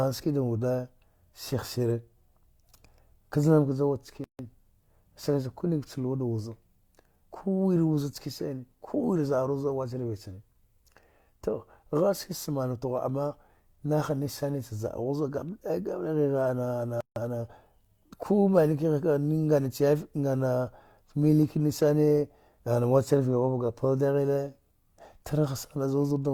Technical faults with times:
4.24-4.39 gap at a join of encoded pieces
17.01-17.16 gap at a join of encoded pieces

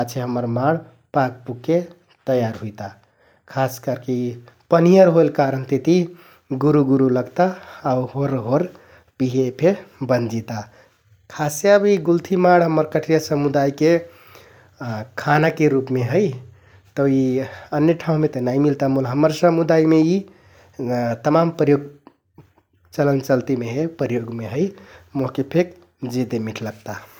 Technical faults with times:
none

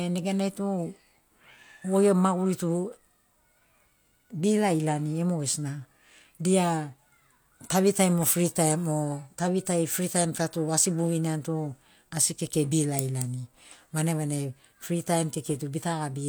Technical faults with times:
none

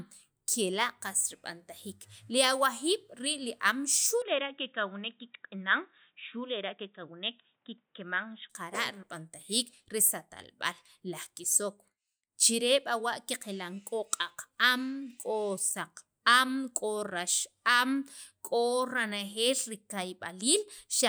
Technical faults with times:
4.22-8.50 input switched to a poorer device

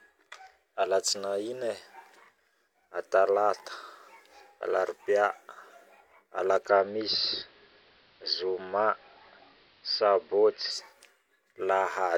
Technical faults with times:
6.55-10.86 digital radio blending to analogue

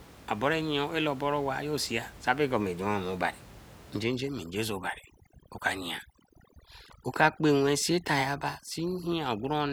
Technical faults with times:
4.03-9.72 overdone noise removal

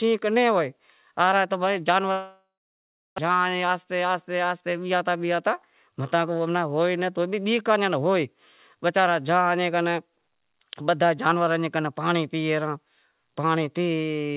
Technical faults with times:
2.12-3.20 long network dropout
3.84-4.33 jitter buffer speed-up

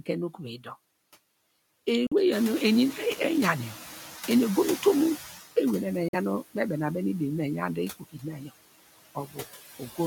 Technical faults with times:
0.00-10.06 noise suppressor artifacts
2.07-2.13 Bluetooth dropout
2.31-5.40 noise suppressor catching up
6.08-6.15 Bluetooth dropout
7.99-8.51 speech cut by the noise suppressor
9.15-9.38 speech cut by the noise suppressor

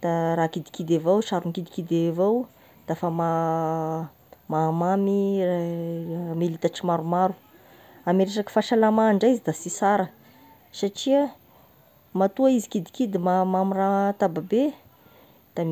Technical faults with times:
none

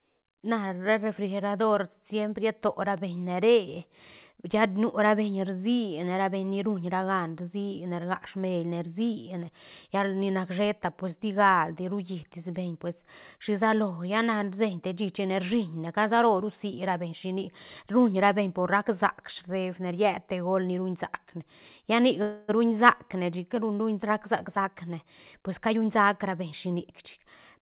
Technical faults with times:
22.22-22.50 call audio freeze
24.47-26.87 jitter buffer speed-up

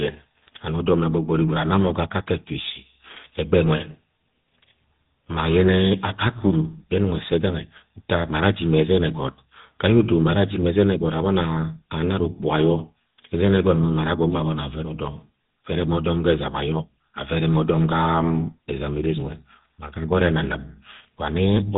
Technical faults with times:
0.00-21.78 GSM full-rate codec

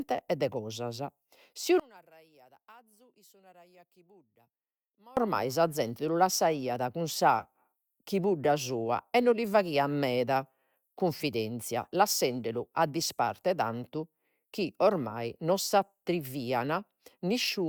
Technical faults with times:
1.80-5.17 one channel inverted

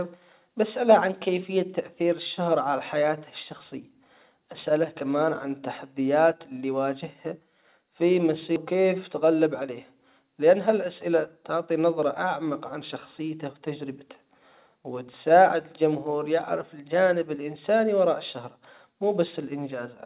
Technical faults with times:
8.56 skip ahead
9.22-9.69 jitter buffer speed-up

